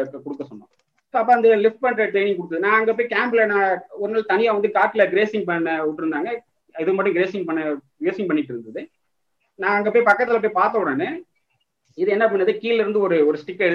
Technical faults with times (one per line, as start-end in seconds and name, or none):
1.32-1.34 hard clipping
4.83-5.02 hard clipping
10.08-10.12 hard clipping